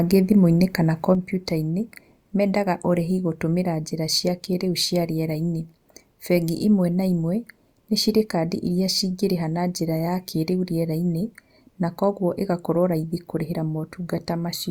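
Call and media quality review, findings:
Speech level drops abruptly by about 6 dB at 1.15 s and stays down to the end. Likely one channel drops out before the mono sum, halving the shared signal.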